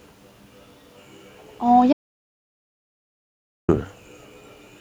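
An audio dropout to silence runs from 1.93 s to 3.69 s in this speech clip, so about 1.76 s of the recording is replaced by silence. The speech cuts off mid-flow and then resumes abruptly, and during the gap even the room tone vanishes, which points to the input signal itself being lost rather than the talker pausing. The likely cause is a disconnected device, a broken link or an accidental mute while the recorder kept writing silence, so whatever was said in that stretch is unrecoverable.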